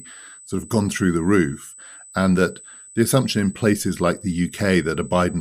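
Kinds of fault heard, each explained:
USB whine: A thin, steady, high-pitched whine sits under the speech for the whole clip, pitched at 8 kHz with its strongest component an octave up at 16 kHz, and it stays roughly 15 dB below the speech level. It arises when the USB bus pulls current in regular 125 microsecond microframes, and that periodic draw leaks through shared power or ground into the audio path as a fixed tone and its harmonics.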